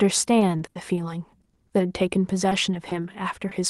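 Speech clip, carried over a call path whose top end stops around 12 kHz, fitting an Opus stream. From 0.39 to 0.99 s there's repeated packet loss (robotic sound): four gaps, the longest 60 ms, patched by stretching the last bit of sound, so about a fifth of that stretch is filler and it comes across choppy and machine-like. After that, short concealed packet loss hits seven more times, at 1.43, 1.53, 1.67, 2.49, 2.71, 2.89 and 3.49 s. Each time about 20 ms never arrived and got papered over with continued sound, leaving a quick smear or wobble where a small piece of the speech drops out.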